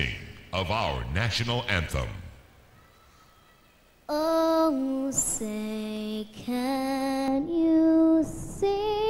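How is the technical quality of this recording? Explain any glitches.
There is one technical fault, near the end. From 7.28 s to the end, de-emphasis is applied wrongly. A treble cut meant to undo pre-emphasis hits audio that never had it, or hits it twice. The top end slopes away, about 11 dB down at 10 kHz against 1 kHz. The sound turns dull and muffled.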